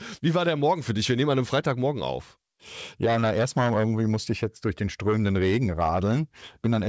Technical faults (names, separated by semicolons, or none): none